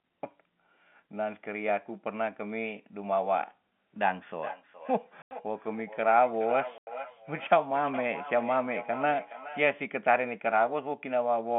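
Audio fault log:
4.35 to 9.64 s, feedback echo between two devices: the speech keeps coming back roughly every 0.4 s, thinner and more ringing each pass, peaking about 12 dB under the direct voice. A second device in the room is replaying the call into this microphone, and this device's echo canceller can't remove it.
5.22 to 5.31 s and 6.78 to 6.87 s, packet loss filled with silence: two hard-edged 90 ms holes cut the speech. The receiver played silence for lost packets, and each gap fits three 30 ms packets, all heard through the narrow telephone band of G.711 mu-law.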